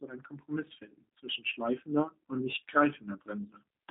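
Speech heard throughout through a narrow telephone-like band, roughly 200 Hz to 3.7 kHz, with nothing above 3.8 kHz, sounds rough, buzzy and plainly synthetic, which is the sound of the G.729 codec, here its G.729A form at a rate that fits 8 kbit/s. The coder discards the waveform itself and rebuilds each 10 ms frame from a vocal tract filter, a pitch predictor and a few pulses, so the speech stays intelligible but comes out coarse and mechanical.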